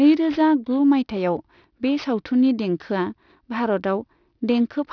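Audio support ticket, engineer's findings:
Aliasing, whole clip. Sibilants gritty and metallic, with spurious tones that don't track the speech pitch. Spectrum runs hard up to about 5.5 kHz and stops, which fits a drop from 44.1 kHz to roughly 11 kHz with no low-pass first. Likely component: resampler with the anti-alias filter missing or bypassed. Content above 5.5 kHz folds back below it at around 30 dB under the speech.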